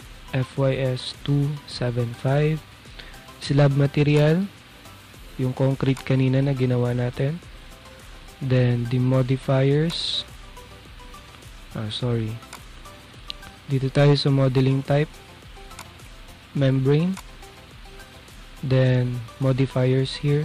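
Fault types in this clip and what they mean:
Hard clipping: the signal was driven about 8 dB beyond what one stage could pass, flattening the tallest peaks, roughly one percent of samples, into crackle on the peaks throughout.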